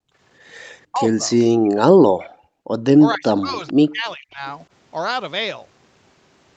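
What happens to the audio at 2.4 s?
At 2.4 s the speech is being pushed down hard, from 1.62 to 2.66 s. It dips by about 40 dB. This is likely speech suppressed in double talk. The echo canceller mistook the talker for loudspeaker echo and turned both down.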